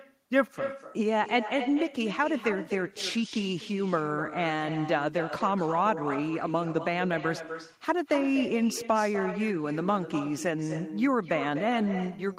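Throughout the clip, with no echo canceller at the far end, the speech returns from a loudspeaker after roughly a third of a second, trailing each phrase as a quieter, thinner copy about 11 dB down.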